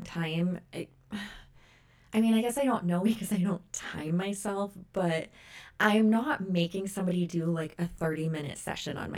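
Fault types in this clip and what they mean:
Channel delay (comb filtering): the speech sounds rough or slightly doubled throughout, because one channel lags by roughly 20 ms and mono summing cuts evenly spaced notches from around 20 Hz.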